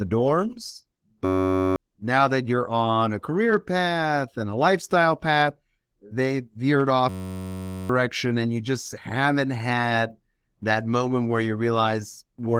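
At 1.25 s a system hang loop takes over until 1.76 s, just before "now that you're on". The machine stalled while the hardware replayed one 10.67 ms block, which fits a 512-sample buffer. It is a steady 93.8 Hz buzz. It returns from 7.09 to 7.89 s, after "lifestyle path they veered".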